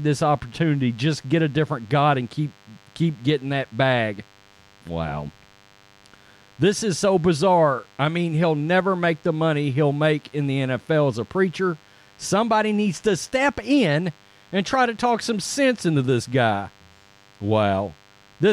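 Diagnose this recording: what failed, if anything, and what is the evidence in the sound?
A thin, steady buzz sits under the speech for the whole clip, pitched at 100 Hz and rich in harmonics, so it sounds edgy rather than like a smooth hum, at around 35 dB below the speech. This is DECT cordless phone buzz, entering at the analogue wiring stage: a nearby DECT handset or base transmits a short radio burst every 10 ms, and the audio circuitry rectifies those bursts into a 100 Hz pulse train that lands directly in the signal.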